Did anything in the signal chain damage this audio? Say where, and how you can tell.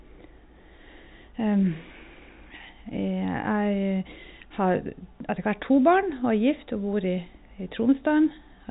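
No, nothing in the chain damaged this speech; it carries the band-limited sound of G.711 mu-law telephone coding at 64 kbps, with nothing above about 3.8 kHz.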